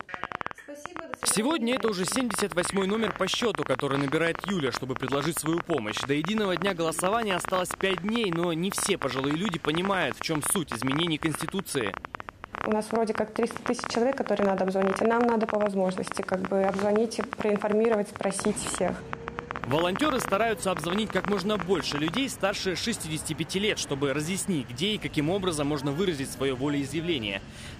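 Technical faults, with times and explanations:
0.01 to 22.18 s, train of clicks: A rapid ticking runs over the sound for about 22 seconds, in the pauses as well as under louder passages. The clicks arrive about 15 times per second, at an uneven pace, several hundred in all. Each pulse has much the same sharp shape. The loudest stand well above the sound, by something like 15 dB. The likely cause is interference from nearby equipment or a faulty connection or power supply injecting pulses.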